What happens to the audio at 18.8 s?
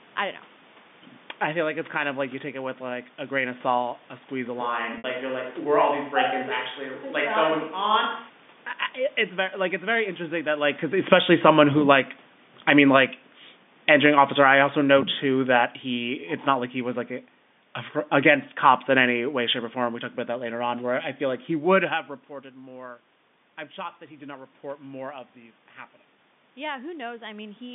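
Nothing goes wrong at 18.8 s: the speech carries on intact through that moment, with only the room noise and the narrow telephone band that run through the whole clip.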